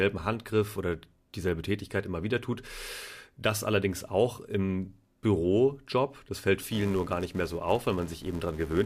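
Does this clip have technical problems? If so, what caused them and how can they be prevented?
Yes. A filter restarted on every block appears from 6.62 s to 8.85 s: each block starts from zero filter state, leaving a small transient that forms a 375 Hz buzz following the speech level, fitting 128-sample blocks. Carrying filter state across block boundaries prevents it.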